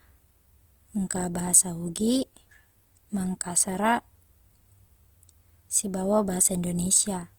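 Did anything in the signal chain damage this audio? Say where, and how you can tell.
Yes, at the codec: likely Opus compression in music mode, fitting 24 kbps, fills starved bands with noise, leaving the speech grainy throughout.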